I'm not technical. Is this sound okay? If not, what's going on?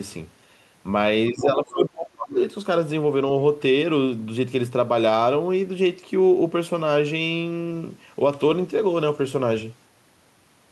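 No. Two things go wrong, both around the same moment.

Speech suppressed in double talk: from 1.31 to 2.35 s, both people were most likely talking at once. The call's echo canceller, which tries to stop the other person's voice from bouncing back, couldn't tell the two voices apart and turned everything down. For about a second, the main speaker's voice sinks sharply, getting much quieter and harder to follow, then recovers.

Other side's voice leaking through: inside that same stretch, from 1.42 to 1.46 s, a brief scrap of a second voice slips in. The speaker's device was playing the other person through its loudspeaker, and the echo canceller likely failed to scrub all of it from the microphone. That fragment sits a bit quieter than the main speech and is over in a blink.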